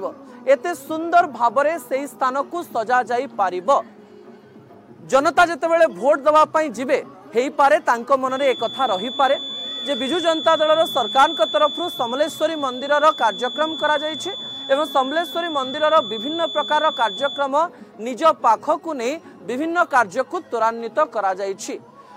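From 8.26 to 17.52 s a feedback whistle near 3.5 kHz sits roughly 10 dB below the sound, likely a speaker-to-microphone loop held just short of runaway.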